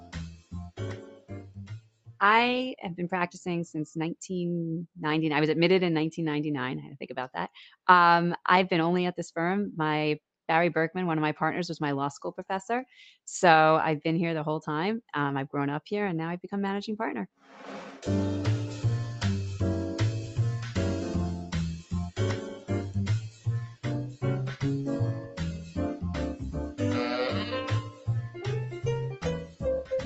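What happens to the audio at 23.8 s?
A speech-tuned noise suppressor mistook this passage for noise between 23.24 and 24.24 s, pulling it down by as much as about 17 dB, so sustained parts sink and decays are cut short. The same noise suppressor, left on for music or sounds throughout, keeps turning steady content down by roughly 10 dB, making the level pump and thin.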